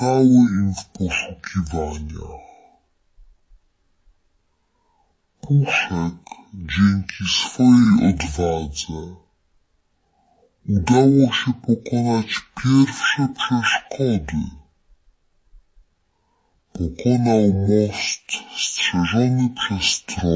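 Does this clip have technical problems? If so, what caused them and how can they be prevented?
Yes, there's a wrong sample rate for the whole clip. Everything runs at half speed and a full octave (12 semitones) low, which fits 32 kHz audio played back at 16 kHz. To prevent it, make sure the playback rate matches the file's rate, or resample properly before playback.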